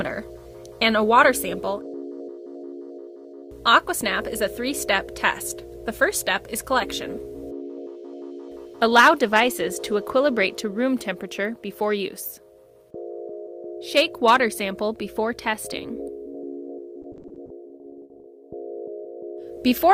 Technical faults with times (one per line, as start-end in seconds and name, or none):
17.02-18.26 repeated packet loss (robotic sound)